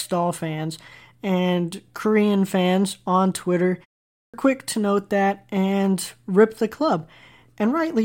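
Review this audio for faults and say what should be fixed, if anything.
At 4.22 s, after a 0.45 s pause, a clipped start removes about 117 ms before "quick to note that" while the output device wakes from idle. Fix by disabling the output's power-saving sleep so it stays active through silence.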